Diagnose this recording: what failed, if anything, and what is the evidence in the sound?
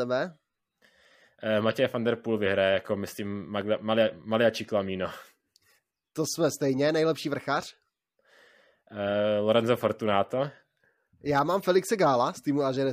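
Nothing failed in this recording, and no stage of the chain leaves any evidence of a fault in the sound.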